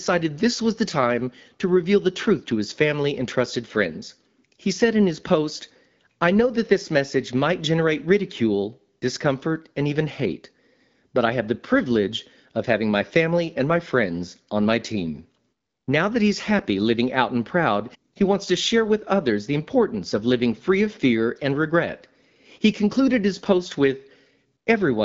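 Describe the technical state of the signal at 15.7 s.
At 15.7 s the speech is intact, with no dropout, glitch or distortion, just the steady wideband sound of the AMR wideband (HD Voice) codec at 12.65 kbit/s, which leaves nothing above about 7.4 kHz.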